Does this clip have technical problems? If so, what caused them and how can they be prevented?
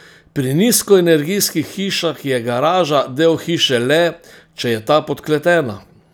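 No, nothing in this speech recording stood out as a technical problem on listening, so there is nothing to trace back or prevent.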